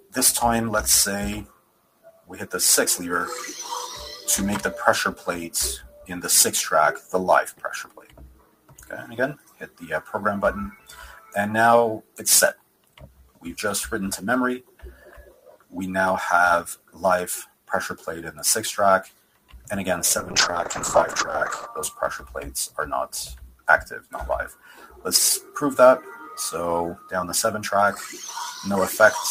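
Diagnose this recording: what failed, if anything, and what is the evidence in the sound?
Throughout, held and sustained parts of the sound pump and thin out while sharp onsets come through intact, with level swings of roughly 15 dB. The stage is call processing: a noise suppressor tuned for speech was left active on audio that isn't speech. It treats steady tones, ambience and reverberant tails as background noise and pulls its gain down on them, letting only transients pass at full level.

In three stretches the suppressor bites hardest, sinking sustained material and clipping decays: 0 to 2.46 s, 5.15 to 19.7 s, and 22.68 to 27.12 s. The drops reach about 17 dB in the first two spans and about 15 dB in the last. Short bursts add up to about a second, seven seconds and a second and a half respectively. This is the same call-processing suppressor misclassifying fading or stationary sound as noise and attenuating it.

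From 20.18 to 21.72 s the sound turns coarse and muffled, with the top end dulled and a rough, watery texture, holding at its worst for about 1.5 s before clearing. The fault lies at the network and codec stages: a call bitrate drop. The bandwidth estimate fell, and the encoder was forced to spend far fewer bits, which fits a fall from about 32 to 10 kbps. Opus then quantises coarsely and narrows its audio bandwidth until the rate recovers.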